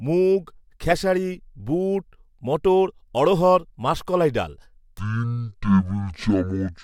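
A speech recording with one fault near its end. From 4.99 s to 6.83 s, the final stretch plays as a section at the wrong speed. It runs at 0.541 times its proper rate, a little over half speed. Pitch drops with it, by roughly ten semitones. The voice turns deep, slow and dragging. The change is abrupt, not gradual. The likely cause is an editor or player fitting that segment to the wrong clock.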